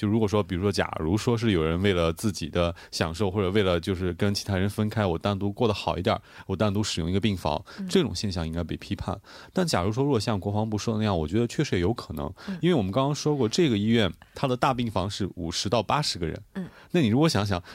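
Nothing goes wrong anywhere in the speech; there's simply no technical fault to point to.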